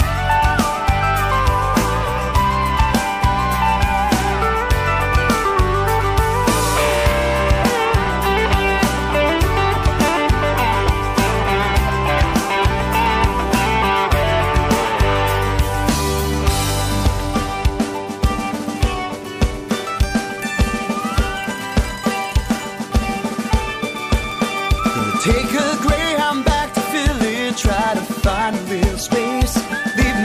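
No technical fault can be heard anywhere in the recording, and the signal holds steady throughout.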